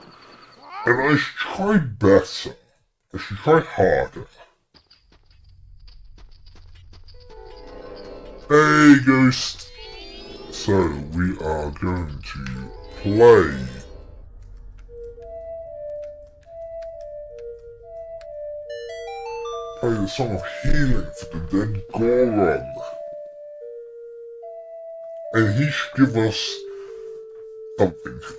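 Audio recorded at one rate is being played back at a lower one with no conversion, a wrong sample rate fault that fits 24 kHz material clocked out at 16 kHz. Throughout, the sound runs at about two-thirds speed and sits roughly 7 semitones low, slow and dragged.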